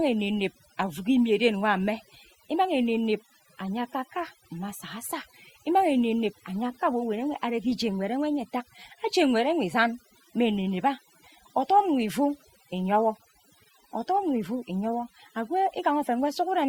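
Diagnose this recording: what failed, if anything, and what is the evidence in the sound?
A noise-suppression stage in the call processing was set far too aggressively and acts throughout this speech clip. It pulls individual frequency bands down to nothing whenever they sit close to its noise estimate, so the pauses collapse into near silence dotted with twinkling specks, and the quieter parts of the voice are stripped away along with the noise. This is overdone noise removal.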